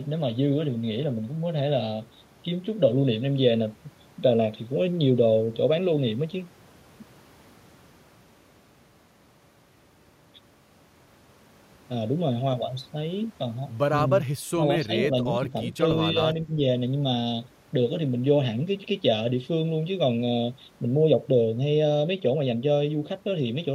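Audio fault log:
14.55–14.62 s, 14.79–14.91 s, 15.10–15.83 s, 16.13–16.18 s: speech suppressed in double talk. Level dips by up to about 10 dB in the first two brief gaps and about 5 dB in the longer third and the last, likely an echo canceller attenuating the near talker during overlapping far-end speech.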